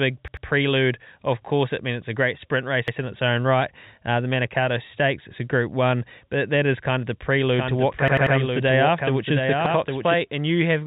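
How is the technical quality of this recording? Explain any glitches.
The recording has two kinds of glitch: stuttering repeats and a stretch where the speech is heard twice. The telephone-band sound, with nothing above about 3.8 kHz, comes from G.711 telephone coding.

Repeated buffer stutters occur at 0.28–0.46 s (two extra plays), 2.88–2.97 s (between "a great sprint race" and "in its own right"), 8.08–8.36 s (three extra plays) and 9.66–9.75 s. Each time, audio arrived late, so the device replayed its last roughly 93 ms block, which fits a 4096-sample buffer. Identical slices repeat back to back with a hard join, unlike an echo.

A doubled audio track runs from 7.59 to 10.14 s, after "is kind of the". A full-band copy about 5 dB quieter trails roughly 0.7 s behind, likely from a second, slower capture path. It has no decay or room colour and starts and stops abruptly, which separates it from reverberation.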